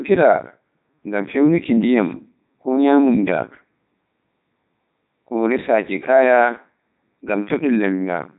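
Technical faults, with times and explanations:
Throughout, Codec 2 vocoder: the speech has been sent through a very low-rate digital-radio vocoder that transmits only pitch, voicing, energy and a coarse spectral envelope, never the waveform itself, and the sound quality fits its 3.2 kbit/s mode. The decoder rebuilds the voice from synthetic sine waves, so the speech comes out heavily damaged, robotic and buzzy, and nothing survives above 3.8 kHz.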